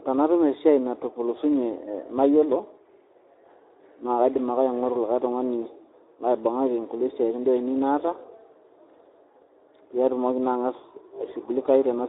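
Speech runs through the Speex codec for the whole clip, and the damage is plainly audible: with too few bits for the excitation, the voice turns hoarse and noisy, a degree of coarseness that fits a rate near 11 kbps. It also sits inside a telephone-like band of 300 Hz to 3.7 kHz. On a spectrogram, energy stops abruptly at about 3.8 kHz with nothing above, the lowest bass is missing, and harmonic striations look smeared and grainy.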